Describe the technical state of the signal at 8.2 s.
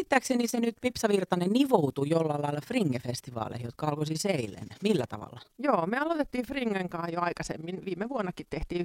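At 8.2 s, overlap-add ripple is present throughout: frames summing unevenly make the level dip by about 11 dB around 20 times a second, a robotic flutter seen as regular scalloping in the waveform envelope. A Bluetooth SBC bit pool drop also runs from 7.06 s to the end. Its halved bit budget, consistent with a pool falling from 31 to 15 near 105 kbps, starves the top sub-bands, dulling the treble and adding grit. On a spectrogram this shows as an abrupt high-frequency cutoff with a speckled noise floor.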